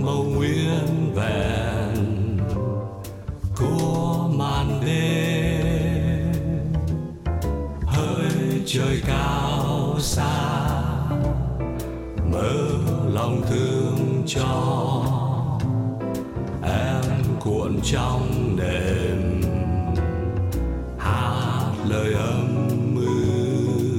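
No faults heard anywhere in the recording.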